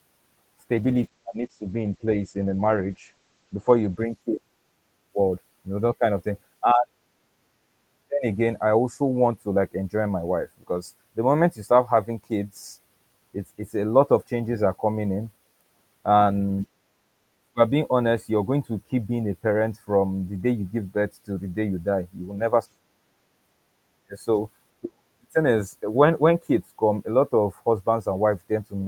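A speech recording with a call bitrate drop from 0.74 s to 5.05 s. The sound turns coarse and muffled, and the top end is cut from 20 kHz to 8 kHz. This fits the encoder falling from about 32 to 10 kbps, worst for about 3 s, recovering before "forward you know that".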